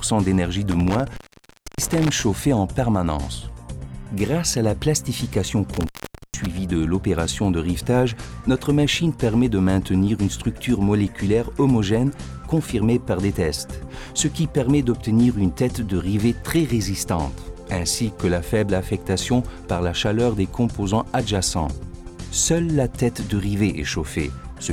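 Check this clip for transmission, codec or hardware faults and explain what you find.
There is a hardware fault: intermittent contact at 0.72 to 2.23 s and 5.73 to 6.46 s. A loose cable or plug briefly opens the line, cutting the sound for about 0.62 s and 0.47 s, with crackle at each break and faint hiss in the gap.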